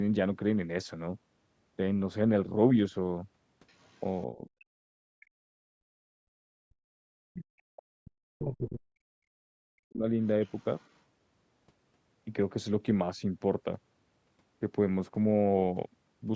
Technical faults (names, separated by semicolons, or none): other side's voice leaking through; speech suppressed in double talk; background gated by the echo canceller